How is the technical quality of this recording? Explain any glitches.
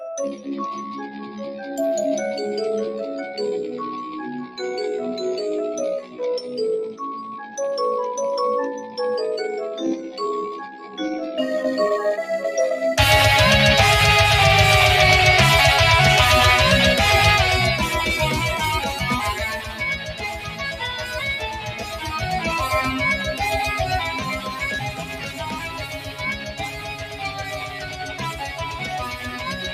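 The recording is technically compromised: a speech-oriented noise suppressor is processing material it wasn't designed for, and several passages are pushed down by it.

Noise suppressor applied to music or sounds: throughout the clip, the suppressor treats sustained, steady content and ambience as noise. It attenuates them by varying amounts, swinging by roughly 15 dB, so held sound and tails sink while onsets pass. The result pumps and thins. Unlike a compressor, which reacts to level, this tracks how steady the sound is, so loud sustained tones are ducked too.

Sound cut by the noise suppressor: the deeper dips fall at 6.03 to 6.19 s (about 9 dB), 10.70 to 10.98 s (about 7 dB), 18.80 to 19.02 s (about 6 dB), 19.33 to 22.20 s (about 11 dB), 23.17 to 23.41 s (about 8 dB), and from 24.03 s to the end (about 12 dB). Decays are clipped short and sustained parts fade, while transients survive. 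This distinguishes it from a dropout, which silences everything including attacks.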